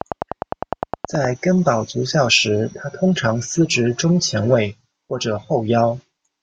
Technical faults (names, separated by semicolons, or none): train of clicks